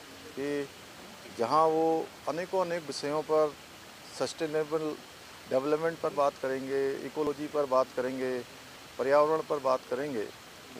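Samples were likely not collected before the hardware overwrote them, a dropped buffer (overrun), so the sound jumps ahead with no gap: at 6.11 s and 8.08 s, losing about 20 ms each, and at 7.27 s, losing about 50 ms.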